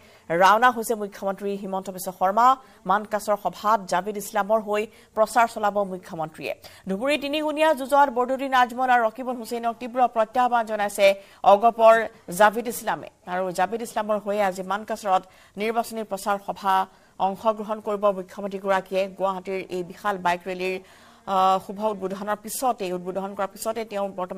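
From 9.28 s to the end, a rough, metallic edge clings to the sound, most noticeable on its brighter, higher-pitched components and absent whenever the audio falls silent. This is periodic clock jitter. Interference was shaking the converter's sampling clock at a steady rate of around 2 kHz, so each sample was taken slightly early or late in a repeating pattern. That timing wobble spawns sidebands about 2 kHz above and below every component, and they grow stronger as frequency rises.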